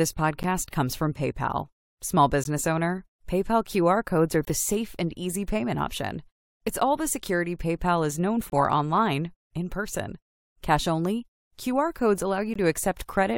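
Short, hard-edged dropouts to silence break into the speech at 0.43, 2.44, 4.45 to 4.47, 8.50 to 8.52 and 12.54 s, each lasting from about 10 to 25 ms and spaced at multiples of two seconds. This is a gap between stream segments. The time stamps of adjacent 2-second segments fail to meet, and the player fills each small hole with silence. Nothing is lost, but the timeline stretches slightly with every gap.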